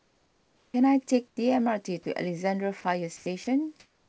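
From the start to 0.74 s the room background is replaced by comfort noise: a flat, textureless hiss about 6 dB quieter than the real ambience. This likely comes from discontinuous transmission, where the receiver synthesises a rough stand-in while the sender is silent. It differs from a gate or dropout because the hiss stays steady and never falls to true silence.

At 0.71 to 0.74 s the first speech sound is onset clipped by the voice detector, likely because it reacted late. The opening 30 ms was never sent, so the word starts with a hard edge inside the comfort noise rather than rising from the background. The word's start is missing, which separates this from a click or a level jump.

The substitution returns briefly from 1.28 to 1.37 s, about 5 dB quieter.

Sound is then dropped by the voice detector at 2.03 to 2.06 s, 2.81 to 2.84 s, 3.17 to 3.26 s and 3.44 to 3.47 s, likely because quiet speech was judged to be background. 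Each gap loses 20 to 50 ms of speech and fills it with the same steady noise. The hiss replacing the speech is what distinguishes this from packet loss, which leaves stutters or glitches instead.

From 3.80 s to the end the comfort noise takes over again, about 1 dB louder. Through the call path nothing is heard above 8 kHz, which fits a wideband codec such as G.722.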